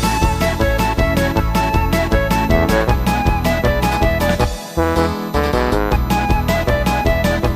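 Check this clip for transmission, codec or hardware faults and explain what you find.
There is one hardware fault, present throughout. It is USB whine. A fixed-pitch tone sits at 1 kHz, strongest at its 4 kHz harmonic, roughly 30 dB below the signal. The bus's 1 ms frame timing leaks into the power or ground and is heard as a whine.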